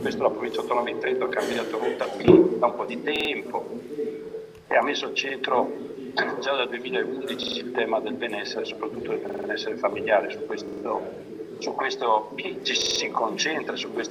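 New audio failed to reach the output device in time, so it replayed its last buffer, a repeated buffer fault, at 1.53, 3.16, 5.29, 7.43, 9.29, 10.68 and 12.82 s. Each 46 ms piece, fitting a 2048-sample buffer, sounds two to five times in a hard-edged stutter.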